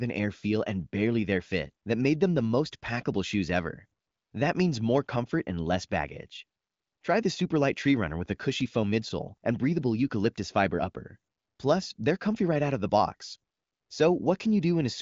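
Speech over AMR-WB HD Voice; no technical faults heard.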